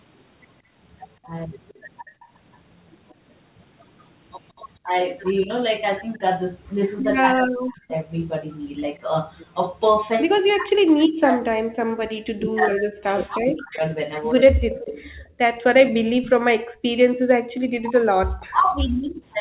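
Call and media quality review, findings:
Echo leak, 1.68–2.58 s, 4.56–4.60 s, 7.03–7.93 s, 14.28–16.32 s: faint delayed copy of the far talker, 177 ms behind, roughly 20–35 dB down, strongest at 14.28 s. Likely residual from the loudspeaker-side echo canceller. Spectrogram shows a weak duplicate of the harmonic pattern offset by 177 ms.

Background gated by the echo canceller, 2.03–2.20 s and 16.6–17.28 s: room noise dips about 16 dB, then about 39 dB, roughly 150 ms and 400 ms in total. Canceller suppression clamps the mic while the loudspeaker plays. On the spectrogram the noise floor has gaps with hard edges. On the waveform the floor drops flat.

Speech suppressed in double talk, 4.83–7.91 s and 9.58–19.21 s: near-end voice ducks by up to around 40 dB in pieces, about 1 s and 5 s in total, while both sides overlap. Likely the echo canceller treating the near talker as echo. The waveform envelope is chopped, and the spectrogram shows high-frequency content vanishing within the G.711 4 kHz band.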